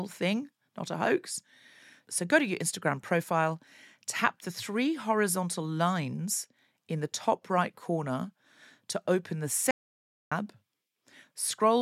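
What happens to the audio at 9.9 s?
An audio dropout to silence runs from 9.71 to 10.32 s, just after "corner to open the". The speech cuts off mid-flow into about 0.6 s of dead silence with no room tone, likely because the input link or device briefly failed while silence was still being written.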